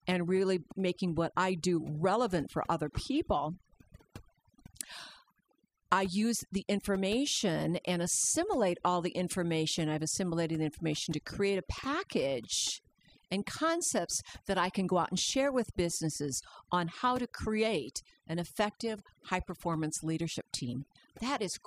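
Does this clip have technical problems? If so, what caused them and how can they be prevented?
Yes: overdone noise removal throughout the speech, where aggressive spectral gating removes bands near the noise estimate, along with quiet parts of the voice, leaving a chirpy near-silent background. Prevent it by applying gentler reduction settings and checking the result against the unprocessed recording.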